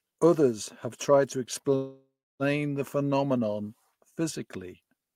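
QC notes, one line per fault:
1.75–2.43 s, call audio freeze: the last sound smears into a fading buzz, then about 0.31 s of silence, before the audio resumes exactly where it stopped. This likely comes from delayed packets emptying the jitter buffer. Unlike a dropout, nothing is lost; instead about 0.64 s of delay is added.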